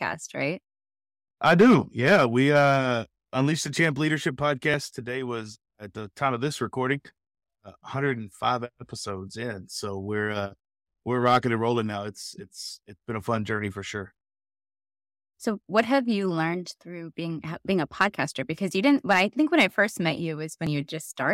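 At 4.74 s, right after "unleash the champ leadership", and again at 20.67 s after "when I first met", the speech jumps ahead, losing roughly 50 ms each time. That's likely a dropped buffer (overrun), where samples got overwritten before being read and the gap was spliced shut.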